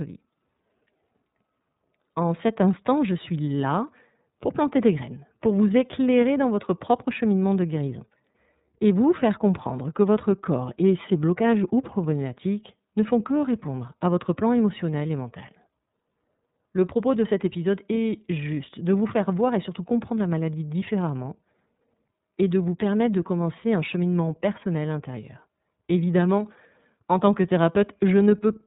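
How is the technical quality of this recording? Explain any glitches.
The technical quality is limited by low-rate narrowband coding that runs through the whole recording. Throughout, the speech carries iLBC codec damage. Each short frame's excitation is coded independently, which fits 30 ms frames at the 13.33 kbps mode. The result is clear but rough, slightly synthetic speech. A spectrogram shows a hard ceiling with nothing above 4 kHz.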